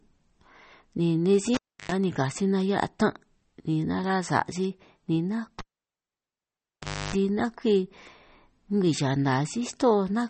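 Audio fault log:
Throughout: MP3 compression, likely the cause of the plainly audible watery, swirly texture on the speech. Nothing sounds above about 8.4 kHz, a fixed treble cut-off. Weak frequency lines flicker on and off between frames, and attacks smear, which fits a bitrate around 32 kbps.
1.54 to 1.92 s and 5.59 to 7.15 s: cable pulled and plugged in. Each begins with a pop and falls to near silence (0.32 s, then 1.51 s). A 50 Hz mains buzz follows as the plug's tip makes contact first (0.10 s, then 0.30 s), and a second pop marks the sound's return.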